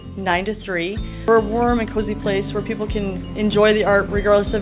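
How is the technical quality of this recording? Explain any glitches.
The recording has two timing glitches, both from how the audio was received over a call link. It is also narrowband, with nothing above 4 kHz, which fits a G.711 mu-law call codec at 64 kbps.

Skip ahead, at 1.28 to 1.30 s: a stretch of audio, roughly 0.7 s, was discarded while later audio was already queued, so playback leaps forward with no filler. The material on either side is butted together, and the jump sounds like an abrupt splice.

Jitter buffer speed-up, from 1.38 s to the end: after the jump, the receiver still held more audio than it wanted, so it repeatedly trimmed tiny pitch-period slices, about a fifth of a second in total. The sound plays about 7% fast at unchanged pitch, giving a slightly rushed feel.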